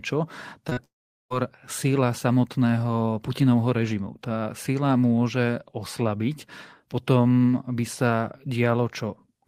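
At 0.69 s and again at 0.73 s, short concealed packet loss: about 20 ms and then 40 ms of speech arrived too late to decode, so the receiver extended the preceding sound to bridge each gap, leaving a brief smeared wobble running to 0.79 s. From 0.85 s to 1.32 s the speech cuts out, most likely a long network dropout. Nearly half a second of audio never arrived, and the receiver's concealment lasts only a moment before roughly 0.4 s of near-silence. The speech then resumes with that stretch missing.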